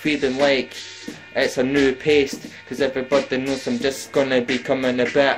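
From start to finish the audio carries periodic clock jitter. The converter's sampling clock is being wobbled at a steady rate of around 300 Hz, so every component of the sound grows sidebands spaced that far above and below it, and higher-pitched content picks up stronger ones. The result is a rough, metallic edge that disappears in silent gaps. Mains hum would stay audible in silence, and wow or flutter would bend pitch rather than add grit.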